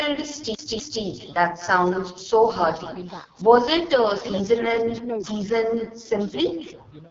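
From the first second to the last, there's an echo with no canceller. The far end is playing the call over a loudspeaker and its mic picks that up, so every phrase returns about a fifth of a second later, about 17 dB down and thin.

The whole clip also goes through the AMR wideband (HD Voice) codec, and it's struggling. The speech sounds rough and raspy, with heavy coding damage that fits the lowest 6.6 kbit/s mode, and there's nothing above 7.2 kHz.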